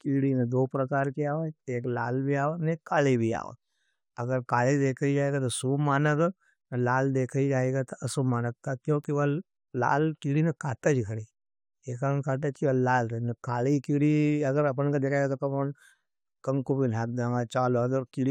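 At 1.05 s and again at 9.04 s, a bit error spike: one flipped bit throws a single sample far off for just that sample, then it snaps back. The result is a bare, full-band tick, about -18 dBFS then about -30 dBFS, unrelated to the speech, unlike an edit click tied to a waveform discontinuity.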